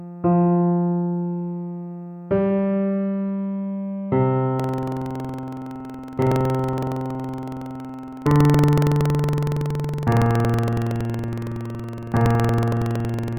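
Buffer tearing starts at 4.55 s and lasts to the end. The program filling the ring buffer and the hardware reading it cross each period, splicing in a sliver of audio a tenth of a second old, producing a 21.5 Hz buzz that fits a 2048-sample buffer.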